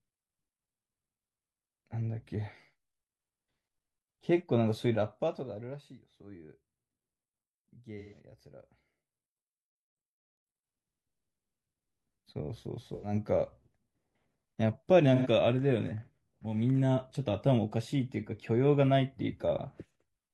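AAC frame loss with concealment hits the speech at 7.99–8.19 s, 12.94–13.13 s and 15.16–15.27 s. The decoder patches each gap, about 128 ms and then 85 ms twice, from the last good spectrum, leaving a brief smeared, noisy, phasey blur.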